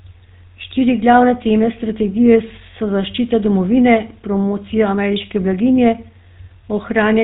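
Throughout, GSM full-rate codec damage gives the speech a buzzy, gravelly roughness and nothing above 4 kHz, which fits 13 kbps; plain band-limiting alone wouldn't add that grit.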